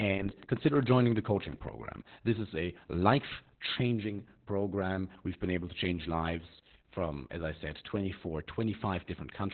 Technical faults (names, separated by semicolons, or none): Opus voice compression